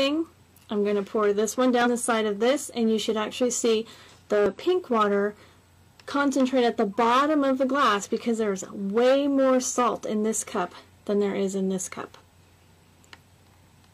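Damaged data in a compressed stream disrupts the audio twice: part of the encoded data was lost, overwritten or mixed with other data, so the decoder misread or rejected the affected frames and had to resynchronise on the next valid frame header. The first event runs from 1.81 to 1.87 s, about 58 ms; the second is a brief disturbance at 4.46 s. Each is heard as a chirp, squawk, click or short hole where the stream was unreadable.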